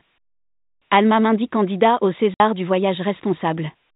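At 2.34 s, just after "candidat au", the speech drops into a 60 ms hole of dead silence with hard edges: packet loss filled with silence, which fits two lost 30 ms packets. Unlike concealed loss, nothing smeared or repeated bridges the gap, and the narrow telephone-band sound of the G.711 line stops abruptly.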